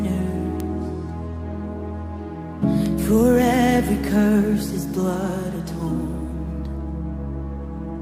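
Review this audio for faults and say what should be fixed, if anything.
A flipped bit in memory or on a digital link pushed sample values by a power of two, causing bit error spikes at 0.60 s (about −7 dBFS) and 2.86 s (about −13 dBFS), each heard as one sharp broadband tick unrelated to the surrounding sound. The first sounds like a lone corrupted sample; the second is consistent with a short run of about three. To prevent this, protect the storage and transfer path with error-checking or error-correcting memory and checksummed links, and repair these two points by interpolating across the affected samples.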